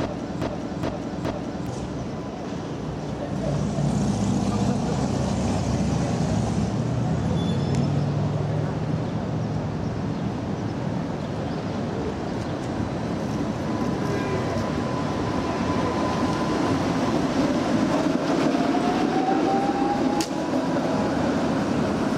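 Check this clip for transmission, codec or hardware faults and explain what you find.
One fault appears, at the very start. From 0.0 to 1.67 s, already under way when the clip begins, a 416 ms fragment of sound repeats exactly, back to back, three times. This is a broken-record loop. The player, encoder or stream likely stalled and kept resending the last fragment it held, so the audio that belonged in that span is lost.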